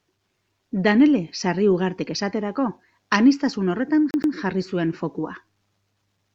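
At about 4.11 s the playback hits a CD stuck on one turn: a scratch knocks the laser back to the same track position on each rotation, so a 117 ms slice of the speech is replayed twice in a row, with a brief mute at each jump. Right after "esaterako aniztasun horretan", the sound stutters in a quick, evenly spaced judder until 4.34 s, when the disc frees itself and "jarri zuen fokua" follows.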